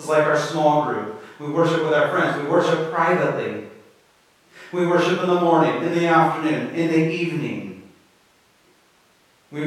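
A listener hears no technical fault in this speech recording at any point.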